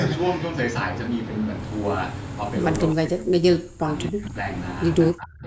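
Echo cancellation on the call likely treated the talker as loudspeaker echo while both sides spoke at once, and its suppressor turned the near speech down with it. This is speech suppressed in double talk. From 2.92 to 3.89 s the speech drops by as much as about 40 dB over most of that stretch. From 4.1 to 4.46 s it dips by about 25 dB, and from 5.12 s to the end it sinks by about 30 dB.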